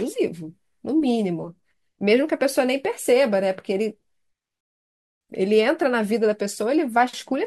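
At 4.61 s the speech drops to silence in a rebuffering stall: the player starved for data, paused 0.6 s, then resumed seamlessly at 5.21 s.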